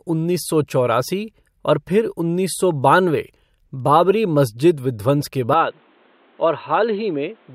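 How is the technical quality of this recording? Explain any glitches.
One fault stands out. Input switched to a poorer device at 5.53 s: likely a change of microphone, cutting everything above 4.2 kHz, so speech turns dull and about 5 dB quieter, with no gap.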